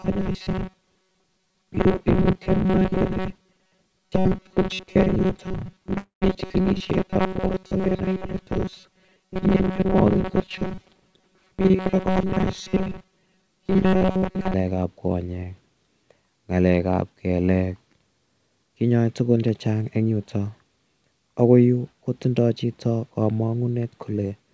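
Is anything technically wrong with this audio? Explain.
Yes. There are three problems, and they overlap in the first half of the clip.

From 0.01 to 14.5 s the speech has robotic sound from repeated short buffers. Audio likely reached the playback side too seldom, so tiny slices were looped while fresh audio was dropped, with roughly 70 percent of this stretch made of repeats. The loop imposes a fixed 188 Hz buzz, which fits a repeated slice of about 5.3 ms. Speech turns into a rigid, metallic buzz that follows the original only roughly. Unlike a freeze, it runs continuously instead of stalling at one moment.

From 5.98 to 6.24 s there is a call audio freeze. The likely cause is delayed packets emptying the jitter buffer. For 237 ms the last sound is stretched out and decays, and about 130 ms of that is silence. When audio resumes nothing has been skipped, but playback now lags about 237 ms further behind. 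Unlike the robotic buzz, it is one brief stall followed by a restart.

From 12.68 to 13.59 s and again from 18.76 to 20.11 s there is a jitter buffer speed-up. The receiver trimmed excess queued audio by cutting out short pitch-period chunks over and over, about 100 ms in the first stretch and about 150 ms in the second. Speech runs about 110 percent fast and sounds hurried, yet its pitch stays put. That unchanged pitch separates it from the robotic looping.

The G.722 call codec at 64 kbps passes nothing above 8 kHz.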